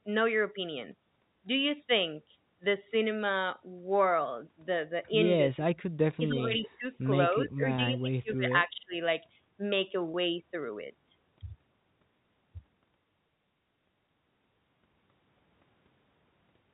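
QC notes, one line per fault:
5.54–5.86, 6.16–6.85, 7.44–8.46, 8.66–8.94 s, speech suppressed in double talk: the talker dips hard, up to about 40 dB, likely the canceller ducking both sides during overlap.
6.64–6.69 s, echo leak: a faint scrap of voice comes back about 20 dB down, 272 ms late, likely loudspeaker pickup the canceller missed.
7.76–7.78 and 10.12–10.14 s, packet loss with pitch repetition: a brief held, buzzy tone where one 20 ms loss got patched by repeating the last pitch period.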